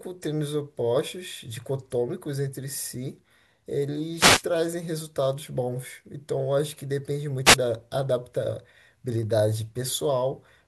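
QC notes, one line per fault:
4.16–4.44 s and 7.45–7.56 s, wireless microphone noise hit: brief static swishes are heard. The radio signal fades, so receiver noise rises.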